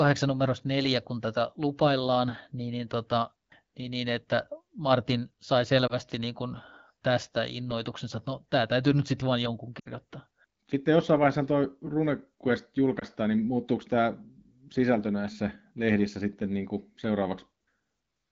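A speech clip with three brief dropouts: a dip or warble at 5.87 to 5.96 s before "niin kuin tästä innoituksensa", a drop to near silence at 9.80 to 9.88 s after "nyt sitten vain jonkun", and a dip or warble at 12.99 to 13.04 s before "niin muuttuuko tämä". These are lost AMR speech frames in the wideband codec: the decoder briefly reused its last good settings at falling gain. The middle gap fits roughly three lost 20 ms frames.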